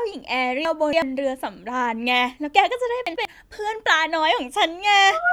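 From 0.65 to 1.02 s and again from 3.07 to 3.25 s, chunks are out of order: a block of about 93 ms plays three blocks late, then one block late, jumbling the sound. The waveform and spectrogram show abrupt vertical seams where the blocks join.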